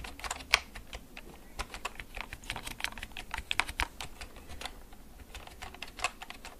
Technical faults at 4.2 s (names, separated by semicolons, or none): none